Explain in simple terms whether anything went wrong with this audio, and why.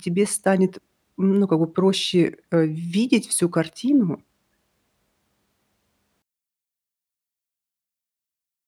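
One channel inverted, from 6.22 s to the end: the speech suddenly drops to a faint trace. The likely cause is that one stereo side was flipped upside down, so when both sides combine into one, the matching speech cancels itself out.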